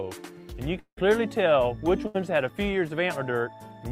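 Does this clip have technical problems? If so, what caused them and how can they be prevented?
Yes, there are two network faults.

From 0.79 to 0.99 s there is a long network dropout. About 0.18 s of audio is missing. The receiver stretches the last sound into a fading buzz or hiss, and the final 70 ms or so is near-silence before the audio resumes further on. This is likely caused by the connection stalling so that no packets arrived for that stretch. On a waveform the envelope shrinks to a flat line. A spectrogram shows smeared, repeating patterns that dim into a dark band, then an abrupt restart. To prevent it, use a more stable network path or a larger jitter buffer, and send redundant packets so short outages can be bridged.

From 2.07 to 2.16 s there is a burst of packet loss. About 80 ms in a row was lost, and the gap was filled by continuing the preceding sound at falling level, so it comes across as a brief held buzz or hiss that sags before the audio jumps ahead. 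A waveform shows a short periodic, decaying segment with a discontinuity at its end. A spectrogram shows frozen horizontal striations instead of natural movement. Forward error correction or packet redundancy, together with a larger jitter buffer, would recover or hide losses of this length.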